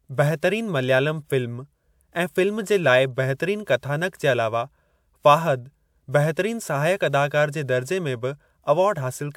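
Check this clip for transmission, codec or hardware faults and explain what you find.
No faults turn up when checking this clip.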